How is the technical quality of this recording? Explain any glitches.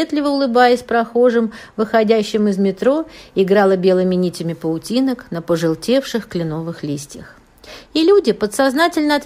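No technical glitches can be heard anywhere in the recording. There is nothing that interrupts or disturbs the sound at any point.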